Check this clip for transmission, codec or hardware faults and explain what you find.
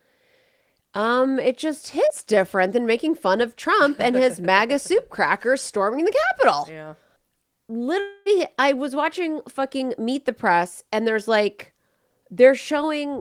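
Two transmission faults appear in this speech clip.

At 2.05 to 2.09 s, just after "um it just", there is short concealed packet loss. About 20 ms of audio arrived too late to decode. The receiver extended the preceding sound to cover the gap. This is heard as a brief smear before normal audio resumes.

At 8.0 to 8.28 s, just before "I was watching fucking", the sound turns into a fading buzz or hiss for about a quarter of a second. There is no silent stretch. The likely cause is a long network dropout. The receiver synthesised the missing speech from the last received signal until real audio returned.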